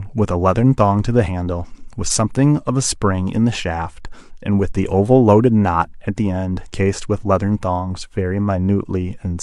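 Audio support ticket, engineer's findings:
No audible faults found on the speech recording.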